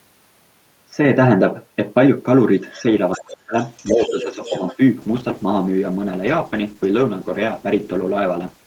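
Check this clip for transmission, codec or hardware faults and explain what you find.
Three kinds of fault show up in this speech clip: echo from the far end leaking through, the talker's voice ducked during double talk, and a steep drop in call bitrate.

Other side's voice leaking through, at 2.71–2.82 s, 3.12–3.34 s and 3.59–4.77 s. The likely cause is an echo canceller that failed to remove the loudspeaker's playback from the microphone. A faint second voice appears, very quiet at first and then louder, reaching only about 15 dB under the talker in the longest stretch.

Speech suppressed in double talk, at 3.17–3.54 s and 3.92–4.61 s, overlapping the leaked echo. Likely the canceller could not tell the talker from the echo and attenuated both. The first dip is severe, about 40 dB, nearly cutting the talker out. The second is a gentle sag of about 5 dB.

Call bitrate drop, from 5.03 s to the end. 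The bandwidth estimate fell, so the encoder was throttled from 64 kbps to 14 kbps and stayed at the lowest rate for about 3.6 s. The coarser Opus coding makes the speech rough and muffled through the final stretch.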